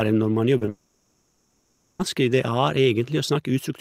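A speech recording with network faults. Short concealed packet loss occurs twice, at 0.57 s and 0.65 s. About 40 ms and then 20 ms of audio never arrived. The receiver patched each gap by extending the preceding sound, so each point brings a brief smear or wobble. Right after, from 0.69 s to 2.01 s, about 1.3 s of speech is gone. Synthetic continuation fills the entire stretch with no silent gap, and normal speech resumes past the lost part. The likely cause is a long network dropout.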